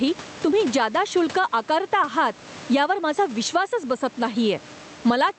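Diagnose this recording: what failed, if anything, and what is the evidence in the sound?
Gain pumping runs throughout. The room background sits about 29 dB below the speech, and the gain swings by around 15 dB. The likely cause is excessive input gain, with a fast limiter in call processing clamping each peak.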